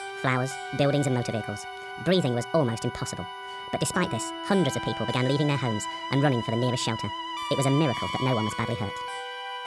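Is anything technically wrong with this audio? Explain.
Yes. Throughout the clip there is a wrong sample rate: everything runs 1.5 times fast and about 7 semitones high, consistent with 16 kHz audio played at 24 kHz. Pitch and tempo rise together, unlike a pitch shift or time-stretch.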